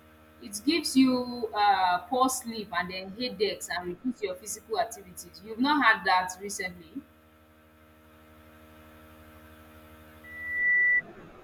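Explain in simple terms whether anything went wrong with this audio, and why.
Near the end, from 10.24 to 11.02 s, loudspeaker feedback squeal: the microphone hears its own loudspeaker, and a 2 kHz tone builds over about half a second into a shriek.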